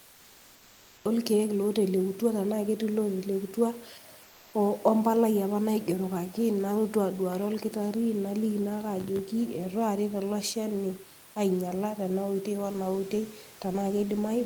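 The first 1.06 s is pure digital silence, and then the speech cuts in mid-sound on "olkeek lotelekutua" with no natural onset. That's a classic cut-off start. The recording or stream began late, so you lose the attack of that first sound and get an abrupt jump from nothing into speech.

From 4.23 to 4.53 s, a 300 ms stretch, the real room noise (about 26 dB below the speech) is swapped for a smooth, featureless hiss that sits about 2 dB quieter. That's comfort noise in place of the background. It's likely discontinuous transmission, as with Opus DTX: the sender stopped sending during the pause, and the receiver filled the gap with synthetic noise roughly matched to a background sitting about 27 dB below the loud parts.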